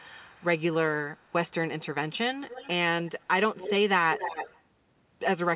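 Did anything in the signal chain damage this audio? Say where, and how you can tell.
Yes. The damage is most likely in call processing on the far end: an echo canceller left some loudspeaker pickup in place, and that residue was sent back as an echo leak. A delayed copy of the speech trails it at 0.0–0.62, 1.1–1.32, 2.13–2.18, 2.4–2.69, 3.03–3.26, 3.56–3.73 and 4.12–4.61 s. The delay creeps from 261 to 271 ms, and the echo ranges from barely audible to nearly as loud as the speech around 3.6 s. All of this sits inside a band that stops at 4 kHz, which fits a G.711 call path.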